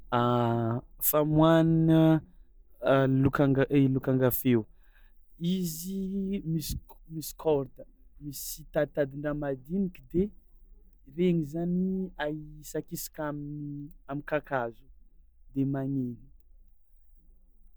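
No technical faults can be heard anywhere in the speech recording.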